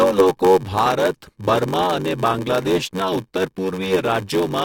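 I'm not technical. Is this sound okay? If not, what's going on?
No. Block size mismatch (padded) runs through the whole clip: one stage hands over shorter chunks than the next expects, which fits a 512-sample block, and fills the gap with silence. That causes a steady buzz near 94 Hz and makes speech run about 14% slower with the same timbre.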